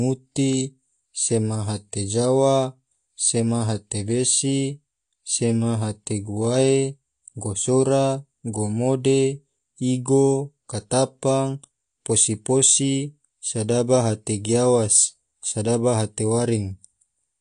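Speech throughout with plainly audible AAC compression damage, likely low-bitrate AAC-LC: a spectrogram shows nothing above 9.8 kHz, and sibilants sound fizzy and smeared.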